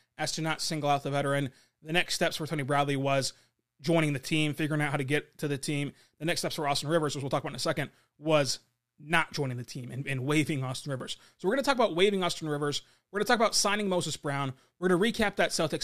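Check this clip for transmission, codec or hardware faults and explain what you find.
Checked the speech recording throughout and found no fault to report.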